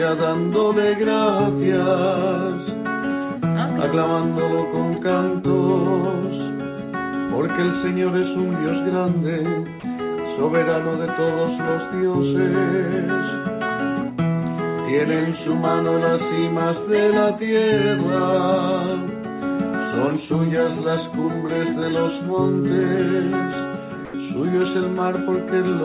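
Sound dropped by the voice detector, 24.05 to 24.14 s: 90 ms of audio gives way to steady comfort noise, likely because the sender's detector mistook quiet sound for background.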